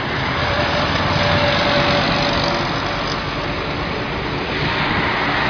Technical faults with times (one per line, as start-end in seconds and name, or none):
none